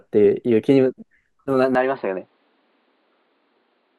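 At 1.75 s the speech abruptly turns duller and a little quieter, dropping by about 5 dB, and stays that way to the end of the clip. Nothing above 4.9 kHz survives from that point, so the sound loses its air and sibilance, and a faint new noise floor appears, roughly 45 dB below the speech. There is no gap at the change. This is likely an input switched to a poorer device, with its narrower band, lower gain and own background noise.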